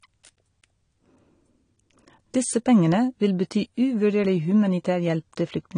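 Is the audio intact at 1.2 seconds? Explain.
No. At 1.2 seconds the speech carries AAC compression, which runs through the whole clip. The sound is dull and smeared, with a fizzy, warbling edge on sibilants. The likely cause is a low-bitrate AAC-LC encode, fitting about 32 kbps, which cut the high end and quantised the spectrum coarsely.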